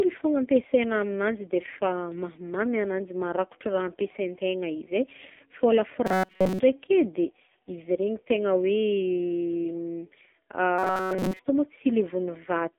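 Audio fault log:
throughout: AMR narrowband mobile codec. Nothing above 3.5 kHz and little below 200 Hz gets through, and heavy damage leaves the speech buzzy and synthetic, as a sparse pulse-driven vocal-tract model rebuilds each frame. This fits a very low bitrate near 5.9 kbps.
6.06–6.60 s and 10.78–11.40 s: robotic sound from repeated short buffers. The speech turns into a rigid metallic buzz at 188 Hz, most likely because a roughly 5 ms stretch of audio is looped while most of the real signal is skipped.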